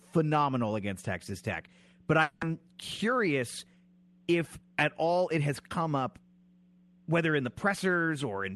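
Long network dropout, 2.22 to 2.43 s: for about 200 ms the last sound is stretched into a buzzy, fading continuation with no silence, and the audio resumes with that stretch missing. The likely cause is packets that never arrived, concealed by the receiver.

Jitter buffer slow-down, 2.49 to 2.76 s: right after the gap, the receiver rebuilt its reserve by repeating single pitch periods, adding 46 ms. The speech plays at 86% speed with unchanged pitch, so sounds are drawn out.

Jitter buffer speed-up, 2.97 to 3.38 s: the buffer then overshot its target, so the receiver cut short pitch-period pieces, about 40 ms in total. Speech runs at 107% speed at the same pitch and sounds briefly hurried, over an Opus call path limited to 12 kHz.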